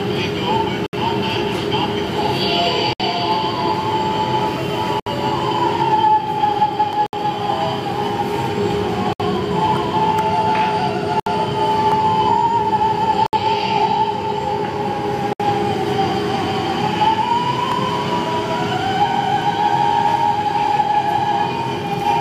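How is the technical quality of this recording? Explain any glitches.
The recording has two kinds of glitch: recurring dropouts and isolated clicks.

Gaps at joins of encoded pieces occur at 0.86, 2.93, 5.00, 7.06, 9.13, 11.20, 13.26 and 15.33 s, each about 67 ms and recurring roughly every 2 s. Separately encoded segments were joined untrimmed, so encoder delay and end padding leave brief silences.

Dropped samples produce single sharp clicks at 6.93, 9.36, 11.92, 17.72 and 19.42 s. The likely cause is a fraction of a millisecond of lost samples, making the waveform jump abruptly.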